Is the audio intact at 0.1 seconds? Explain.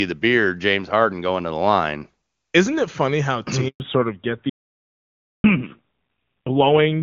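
Yes, the speech at 0.1 s is intact, with no fault to be heard at that moment.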